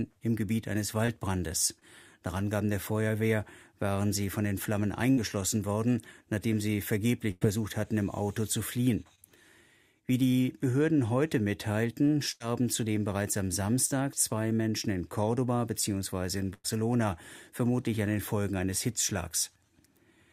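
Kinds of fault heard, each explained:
Short concealed packet loss: Tiny pieces of the stream arrived too late to decode, about 20 ms each time. The receiver patched each hole by extending the sound just before it, then faded back into the real signal. This clip has three of these, near 1.05 s, 1.79 s and 9.15 s. Each lasts roughly 40 ms including the blend. They come across as brief smears or wobbles.
Burst of packet loss: Several consecutive packets went missing, leaving longer holes. The receiver kept continuing the previous sound while turning it down. Playback then resumed further along, with the audio in between lost. There are four bursts, at 5.11 s, 7.31 s, 12.31 s and 16.54 s. They remove about 60 ms, 100 ms, 80 ms and 100 ms respectively, each heard as a held, fading stretch before a jump.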